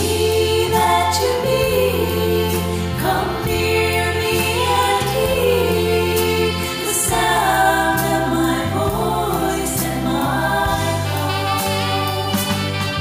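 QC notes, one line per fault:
Nothing to flag here; I listened all the way and didn't catch a single problem worth noting.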